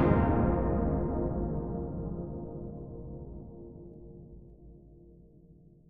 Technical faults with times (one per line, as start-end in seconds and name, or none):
none